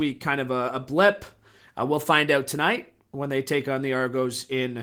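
No faults are audible anywhere in this speech recording.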